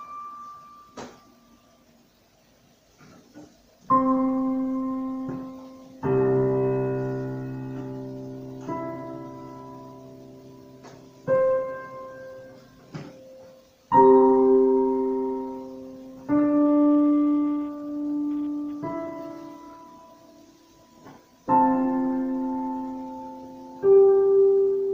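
No technical faults are audible anywhere in the audio.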